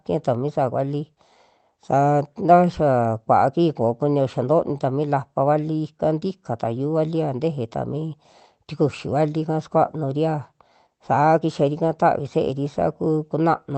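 Nothing stood out on listening to this speech clip, which comes through an ordinary call path with its usual coding character.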